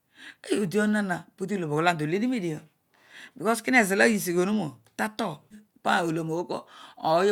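At 5.50 to 5.55 s the speech jumps abruptly forward, with a brief blip lasting about 50 ms where the two sides of the join meet and the flow of the talk breaks with no pause or fade. This is likely a stream segment skipped: one chunk of the segmented stream failed to arrive, and the player carried on with the next one, so a stretch of the programme is missing and the audio resumes further ahead.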